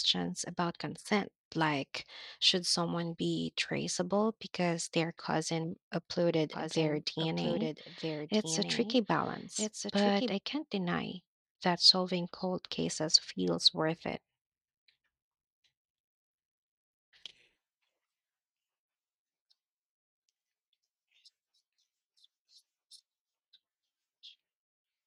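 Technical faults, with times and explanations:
6.53–10.33 s: doubled audio track. A second full-band copy of the speech trails the original by about one and a half seconds at roughly 5 dB lower, dry and uncoloured, starting abruptly just before "can't deny that solving" and stopping just as abruptly. This is likely from a slower second capture path or a misaligned edit layering two copies.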